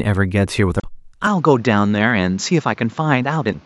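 At 0.77 s there's a quick glitch lasting about 0.07 s. That's damaged data in a compressed stream. A stretch of the encoded data was corrupted, so the decoder misread those frames, lost its place and had to hunt for the next valid frame header before it could carry on. That's why you get a brief glitch.

From 1.27 s the speech goes duller and stays that way to the end. Nothing reaches above 7.4 kHz, so the top end that gives consonants their air is gone. The likely cause is the input switching to a poorer device, another mic or a headset call profile with a narrower band. There's no gap at the switch and the level barely moves, but a new noise floor comes in, sitting roughly 30 dB under the speech.

At 3.49 s a second glitch of the same kind hits, about 0.05 s long. It's damaged data in a compressed stream again: corrupted frames, the decoder resyncing, and a short glitch where it skips past the bad patch.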